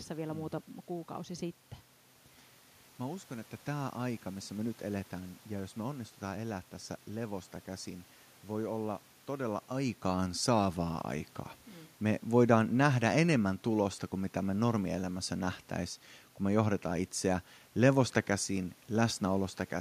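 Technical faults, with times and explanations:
No technical faults are present in the speech. The room's own background noise is audible, and around 9 or 10 seconds the level shifts as the talker moves relative to the microphone.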